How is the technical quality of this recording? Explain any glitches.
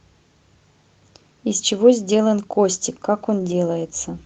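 The recording has one glitch, a lost packet rebuilt from error correction, in speech carried over an Opus call path whose spectrum stops at about 8 kHz.

From 3.39 to 3.53 s, roughly 80 ms of audio went missing in transit, which fits four separate 20 ms packets. Each following packet carried a low-bitrate backup copy, and the decoder played those instead, so there is no silence. The patch sounds rougher and noisier. On a spectrogram it appears as a short, grainier, smeared band. The waveform stays continuous, with no dropout.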